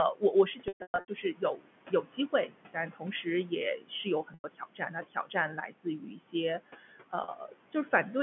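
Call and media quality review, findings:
Noise suppressor artifacts, full clip. Background pulled down by about 18 dB, pumping between speech segments and rising under them. Suppressor gain is estimated frame by frame per band, so its decisions flip as speech starts and stops, leaving the residue modulated rather than steady. Room noise sits about 16 dB below speech, so there is enough noise floor for the gating to be heard.

Speech cut by the noise suppressor, 0.14 s to 7.93 s. Soft consonants, word endings and quieter stretches sound swallowed or faint, with the deepest drops about 19 dB. Roughly two seconds are affected in total, spread across the clip. The suppressor classed low-level speech energy as noise and attenuated it along with the background.

Packet loss with pitch repetition, three events.
0.68 s to 1.08 s: 340 ms lost, scattered over 400 ms, with the longest gap 120 ms. 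Held, buzzy repeats, the longer gaps fading to silence, then short cross-fades back in.
4.34 s: 100 ms gap. Buzz fades toward silence.
7.24 s: 40 ms gap, heard as a brief held note.
The receiver concealment replays the last pitch period, and the gap sizes fit 20 ms packets. Band limited to 150 Hz to 3.4 kHz by G.711 line coding.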